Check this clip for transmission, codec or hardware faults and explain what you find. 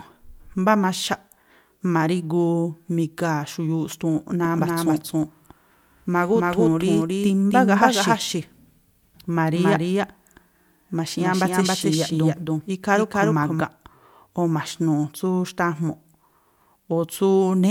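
One fault is present: a doubled audio track running from 4.45 s to 13.61 s. Across that stretch the speech is heard twice, with a second full-band copy trailing about a third of a second behind at roughly the same loudness as the original. It is likely caused by the audio being captured again through a slower path, or by an edit leaving two copies out of step. Unlike room echo or reverb, the copy has no decay and no added room colour, and it cuts in and out abruptly at both ends.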